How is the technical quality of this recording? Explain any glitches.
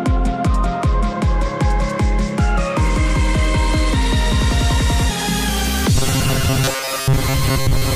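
One glitch stands out. From 5.96 s to the end of the clip, the sound collapses into a rigid, metallic buzz locked at 134 Hz that only loosely follows the original. This is robotic sound from repeated short buffers, likely because new audio was arriving too slowly. A fragment of roughly 7.5 ms is looped in place of most of the real material, and that repetition rate imposes the fixed pitch.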